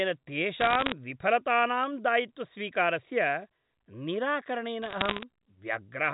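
From 0.60 to 0.92 s and again from 4.82 to 5.23 s, bursts of sharp ticks and crackle sit on top of the speech: bit errors on a digital phone line. Roughly 0.7 percent of bits are flipped, and each flip changes a single sample of the G.711 stream. Where it lands on the sign of a loud sample or an upper bit, that sample jumps far off and clicks. Unlike packet loss, nothing drops out; the speech underneath runs on unbroken.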